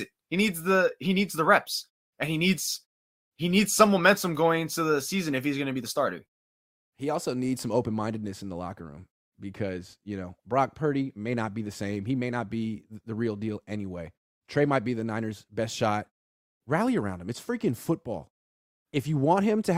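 No technical faults can be heard in this speech clip.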